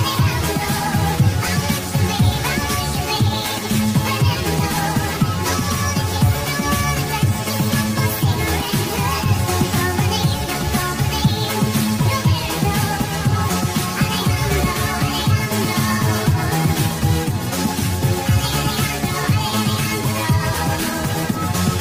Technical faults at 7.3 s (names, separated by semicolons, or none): none